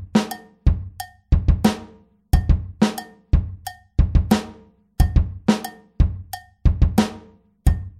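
Nothing goes wrong anywhere in this one; there's no dropout, glitch or distortion to point to at any moment.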